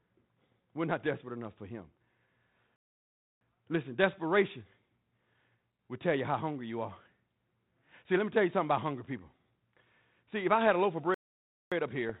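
At 2.76 s the speech cuts out into dead silence until 3.41 s, about 0.65 s, and then picks up again. It happens a second time right after "had a loaf of", silent from 11.14 to 11.72 s, roughly 0.57 s. Both are playback stalls: the player likely starved for data or had its thread blocked, so the output simply went quiet mid-flow until it caught up.

Right at the end, at 12.09 s, there's a short rough pop with a quick lurch in level. That's bit errors on an ADPCM link. The band-limited, slightly grainy character of the line fits G.726 ADPCM at around 32 kbit/s, and a low error rate, somewhere near a fifth of a percent, landed in what sounds like a couple of frames. Each flipped bit knocks the decoder's step size and prediction off, so the damage rings on briefly instead of staying a single click.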